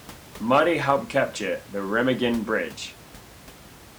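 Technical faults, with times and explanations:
Nothing stood out on listening, apart from faint room noise sitting about 22 dB below the speech.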